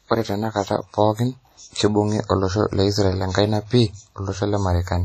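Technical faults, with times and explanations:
Throughout: WMA compression. The speech was likely squeezed through an early Windows Media Audio encoder at a low bitrate, which fits something near 32 kbps. Its long transform blocks smear quantisation noise over tens of milliseconds and drop weaker spectral lines entirely, so the speech rings and sounds washy, with a hiss that swells and fades along with the signal. The damage is heavy, and nothing remains above 14.6 kHz.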